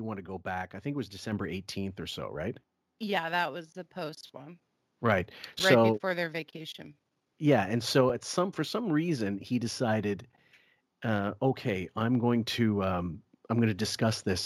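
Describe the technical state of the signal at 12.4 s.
Nothing is wrong with the signal at 12.4 s; the audio is intact at that point.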